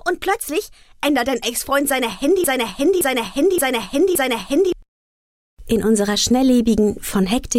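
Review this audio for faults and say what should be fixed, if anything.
From 2.44 to 4.72 s a broken-record loop repeats one 571 ms fragment four times, likely a stalled player or stream; the spectrogram shows identical blocks. Adding stall detection and buffer-underrun recovery would prevent it.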